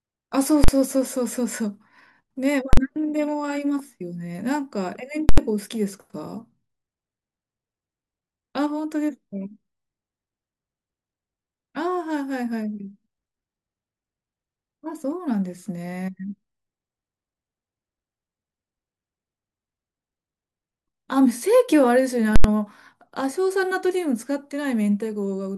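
At 0.64 s, 2.73 s, 5.29 s and 22.36 s the speech is broken by invalid numbers at full scale. Each block sits flat at one extreme value, far beyond the speech's peaks. The first two last about 43 ms and sound like single loud bangs. The last two last about 85 ms. These lengths fit 2048- and 4096-sample blocks.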